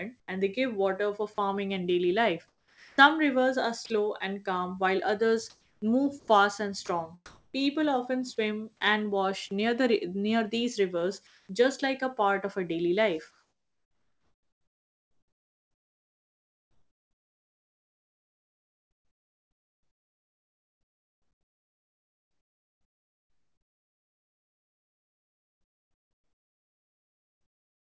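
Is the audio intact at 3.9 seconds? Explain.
No. From 3.86 to 3.90 s the speech briefly gives way to steady noise or near silence for 40 ms, likely sound dropped by the voice detector, with comfort noise filling the gap.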